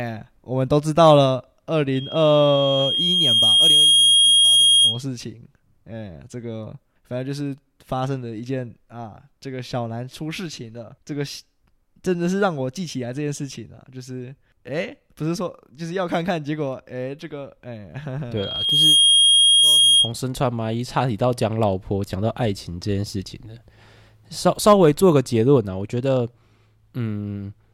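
At 1.95 s a loudspeaker feedback squeal begins, a 3.2 kHz tone swelling over about two seconds to roughly 10 dB above the speech before stopping at 5.02 s. The microphone is hearing its own loudspeaker. It returns from 18.37 s to 20.12 s, rising faster, within about half a second.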